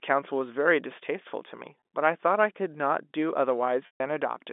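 At 1.8 s a 20 ms gap is bridged by packet loss with pitch repetition, heard as a briefly held, buzzy tone. From 3.86 to 4.00 s a 140 ms loss, which suggests seven packets, repeats the last pitch period, fades to silence, then cross-fades back into the narrowband telephone speech.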